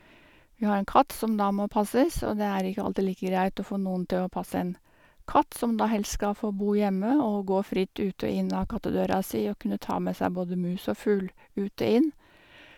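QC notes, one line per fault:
No faults heard.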